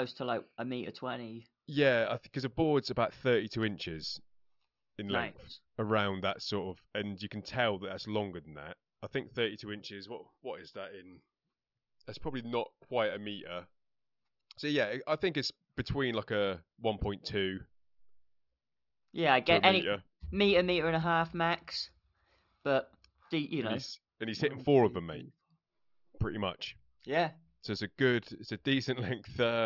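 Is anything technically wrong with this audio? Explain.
No, nothing is technically wrong with this speech recording. There is no fault to point to at any point in it.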